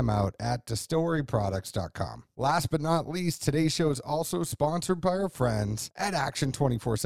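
From start to end, the speech carries overlap-add ripple. The frames were rejoined with an overlap whose windows do not sum to a steady gain. The level dips and swells by about 6 dB once a frame, around 150 times a second. That gives a metallic buzz with extra tones around each note.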